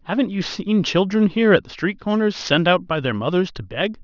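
Aliasing runs through the whole speech clip. It sounds like a drop from 24 kHz to 12 kHz without an anti-alias filter, so anything above 6 kHz folds back down as gritty, metallic fizz on the sibilants, sitting roughly 25 dB under the voice and crowding the band edge.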